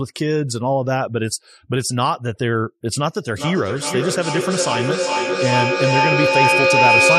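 A feedback echo between two devices in the same room starts at 3.36 s and lasts to the end of the speech clip: each word returns about every 0.4 s, building to about 6 dB above the speech.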